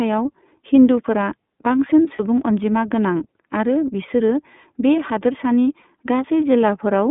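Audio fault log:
throughout iLBC codec: narrow, slightly rough and synthetic sound, band-limited to about 150 Hz–3.6 kHz, from independently coded frames, which fits iLBC's 30 ms, 13.33 kbps mode.
2.16–2.20 s and 5.82–5.85 s lost iLBC frames: brief held, buzzy vowel-like fill lasting 30 ms each, where the decoder repeated the last pitch cycle, recovering immediately afterwards.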